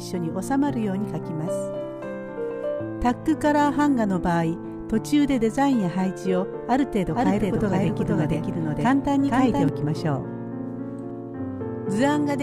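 From 7.15 to 9.69 s the sound is heard twice, a second full-band copy trailing about half a second behind at roughly the same level, with no decay or room colour. It starts and stops abruptly. This doubled audio track is likely from a slower second capture path or misaligned edit.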